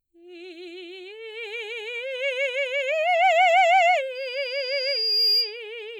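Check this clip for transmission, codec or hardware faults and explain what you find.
One hardware fault is present in the music. Loudspeaker feedback squeal runs from 4.15 to 5.60 s. A microphone is hearing its own loudspeaker, and the loop gain tops one at 4.8 kHz. That tone swells over about a second into a piercing whistle, ending a few dB above the music.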